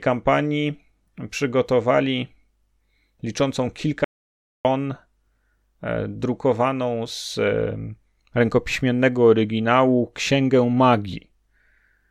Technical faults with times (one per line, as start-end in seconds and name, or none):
4.04-4.65 audio dropout to silence